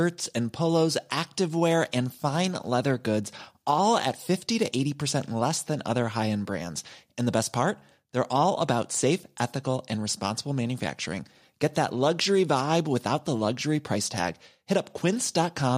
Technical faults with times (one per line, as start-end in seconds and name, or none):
none